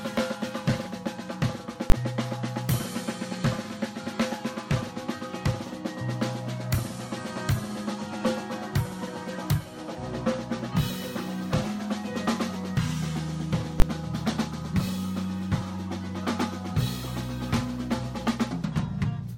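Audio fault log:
1.90–1.92 s and 13.80–13.82 s, invalid numbers at full scale: each time a 20 ms block of output is replaced by one extreme value, far beyond the audio's peaks, so the audio jumps straight to that level, holds there, then drops back. A block this short gives no room to hear the flat stretch between the two steps, so each event comes across as a single loud bang. The cause is a calculation that produced infinite or invalid values, which the output then clamped to the extreme of the range.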